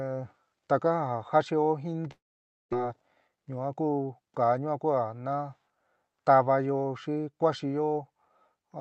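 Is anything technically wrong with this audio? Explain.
Yes, two faults stand out in this speech, heard through a call path whose Opus coding keeps content only up to about 8 kHz.

From 2.11 to 2.75 s there is a gap that is likely a long network dropout. When audio stopped arriving, the receiver stretched the last sound into a fading buzz, then left near-silence for roughly half a second. About 0.4 s of speech is gone, and the speech resumes past the missing part. On a waveform, the envelope decays into a flat line. On a spectrogram, smeared harmonics fade into an empty band.

From 2.82 to 4.74 s, just before "kua natávayó xi", a jitter buffer speed-up plays the speech about 9% faster. After the gap, the buffer held roughly 200 ms more than it wanted. To shed that delay, the receiver repeatedly cut out pitch-period-sized pieces, so the speech sounds hurried while its pitch stays the same. 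A spectrogram shows syllables packed closer together with unchanged harmonic spacing. A waveform shows tiny seams where cycles were removed.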